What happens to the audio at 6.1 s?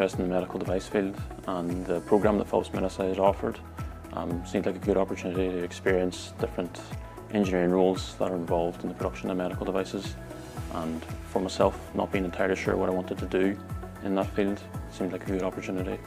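Nothing goes wrong at 6.1 s; the audio plays through that moment intact, with no dropout, click or distortion.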